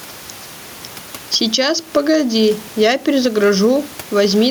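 Gain pumping runs through the whole clip, with the gain swinging by around 10 dB. The likely cause is input gain set far too high with a fast limiter clamping each peak, leaving the speech squashed, while the room noise itself sits about 29 dB below the speech.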